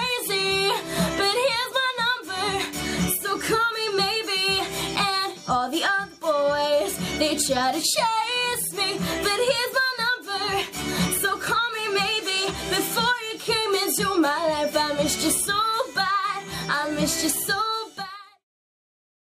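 Nothing stood out on listening; the level simply eases away in a smooth fade-out that ends at about 18.46 s.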